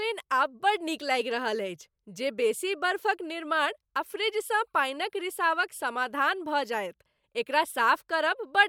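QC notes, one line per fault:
Nothing to flag here; the speech comes through with no faults heard anywhere in the clip.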